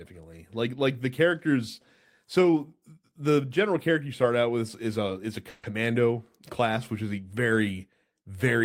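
At 5.49–5.65 s a call audio freeze stretches the last sound into a fading buzz; packets were likely delayed, so speech resumes 140 ms late with nothing lost.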